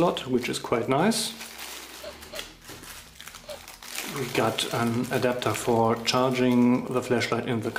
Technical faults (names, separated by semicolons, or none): none